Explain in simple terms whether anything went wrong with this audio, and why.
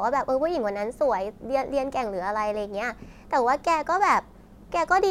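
Nothing in this speech recording stood out as having gone wrong on listening.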